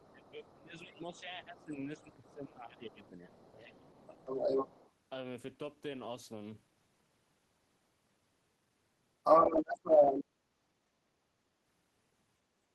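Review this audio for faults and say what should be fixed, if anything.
The echo canceller likely failed to remove loudspeaker pickup, so the other side's voice leaks through at 0.00–0.58, 1.16–2.33, 2.92–4.92 and 9.23–10.25 s. It is faint at first, then as loud as or louder than the talker. Better acoustic isolation or a stronger echo canceller would prevent this.

Speech suppressed in double talk likely comes from the canceller turning everything down while both sides spoke, so the talker dips by up to around 15 dB from 0.11 to 4.2 s. Reliable double-talk detection would keep the near talker at full level.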